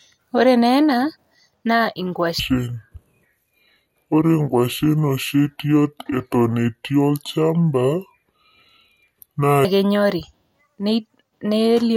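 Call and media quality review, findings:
Section at the wrong speed, 2.39 to 9.65 s: speech drops deep and dragged, playing at 0.634x, pitch down roughly seven semitones. Speed and pitch shift together, so likely a playback or edit stage running on the wrong clock.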